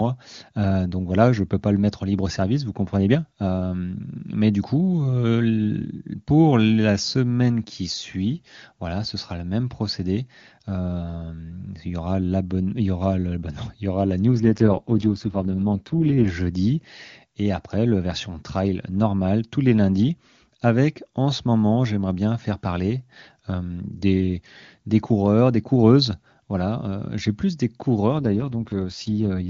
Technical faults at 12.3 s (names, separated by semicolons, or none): none